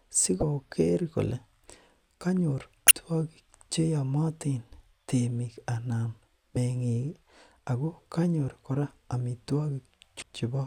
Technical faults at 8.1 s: none

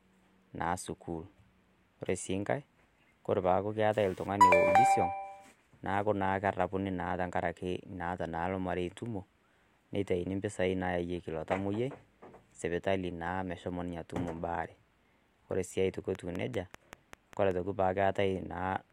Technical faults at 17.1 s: train of clicks

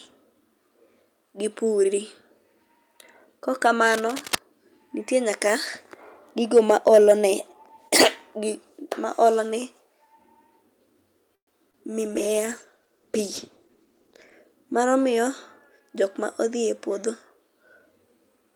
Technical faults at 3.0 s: none

